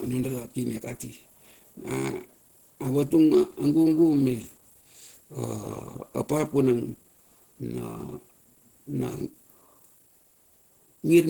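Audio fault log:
Throughout: Opus compression, likely from a low-rate hybrid encoding near 16 kbps. The speech sounds hoarse and grainy, with noise filling bands in place of clean detail. A spectrogram shows smeared, speckled texture in the upper bands and nothing above 20.2 kHz.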